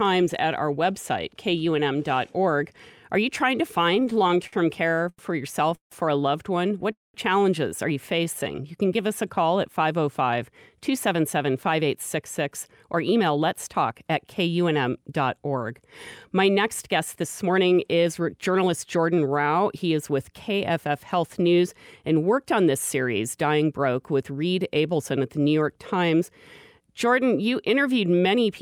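From 3.95 to 5.94 s, between "you trying to" and "or a loved one", the speech shows repeated stalls (stutter): seventeen short gaps, the longest 164 ms, together filling 440 ms, about a fifth of that span. Packets were arriving late, so the jitter buffer kept running dry and the receiver stretched the last sound each time. Nothing is lost, but the phrase jerks forward in halting steps. What sets it apart from a single freeze is the many brief hitches rather than one hold.

At 6.92 to 7.17 s, just before "challenges are you", there is a call audio freeze: one 217 ms hold in which the last sound is carried on briefly and then gives way to about 180 ms of silence. The likely cause is packets held up in transit that emptied the jitter buffer. The speech then resumes where it stopped, so the gap is inserted and no speech is missing. It is a single clean break, not a string of stutters.

From 8.17 to 9.42 s, after "challenges are you", a jitter buffer slow-down plays the speech at 89% speed. 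The receiver repeated single pitch periods to rebuild its reserve, adding 149 ms. The pitch stays the same, so unlike a tape slowing down, the result is drawn-out vowels and a slightly lagging rhythm.

Two jitter buffer speed-ups follow. From 11.13 to 14.28 s the speech runs at 108%, and from 16.99 to 19.54 s at 107%. The receiver trimmed short runs of pitch periods to shed excess buffered audio, removing about a third of a second in the first stretch and about a fifth in the second. Pitch is unchanged, but the delivery sounds hurried and clipped. This is the mirror of the slow-down, and there are no gaps or held sounds of the kind heard in the stalls.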